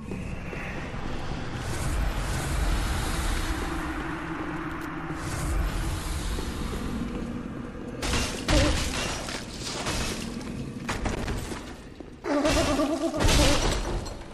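At 4.71 to 4.85 s and again from 10.81 to 11.25 s, loose connector crackle breaks in as irregular scratchy bursts: a worn contact rapidly making and breaking chops the signal. The clicks come unevenly spaced, unlike the regular ticking of a clock or buffer fault.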